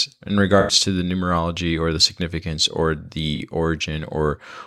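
A speech clip with two brief smeared, noisy patches where the sound blurs instead of continuing cleanly: from 0.60 to 0.72 s, just before "to the numerology or", and from 3.36 to 3.40 s, right after "or the significance or". Both come from AAC frame loss with concealment. The decoder lost compressed frames and rebuilt the gap from the last good spectrum. The first gap, about 85 ms, fits four missing frames, and the second, about 43 ms, fits two.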